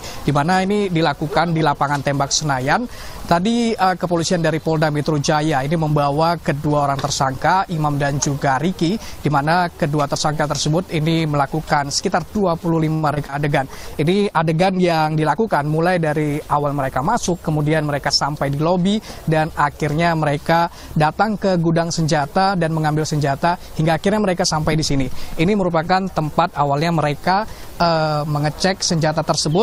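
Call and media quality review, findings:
Choppy sound with pieces missing, 12.93–13.40 s: repeated packet loss (robotic sound). Four holes, longest 89 ms, filled by stretching prior audio; roughly a third of the span concealed.

Rough, muffled, watery texture, 13.50–18.71 s: call bitrate drop, 64 to 23 kbps. Encoder starved of bits, coarser Opus coding with high frequencies trimmed.

Hurried pacing at unchanged pitch, 15.17–16.03 s: jitter buffer speed-up to 108%. Receiver drained excess buffered audio by cutting pitch-period slices, around 70 ms in total.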